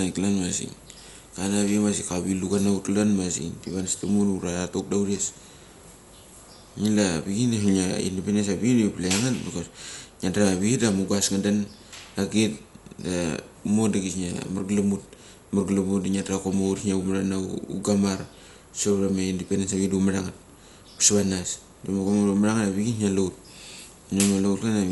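From start to end the speech sounds dull, with nothing above 11.5 kHz and a rough, fluttering noise around voiced tones. The likely cause is Dolby Digital compression near 64 kbps. Starved lines are refilled with dither noise, giving grainy hiss rather than MP3's metallic warble.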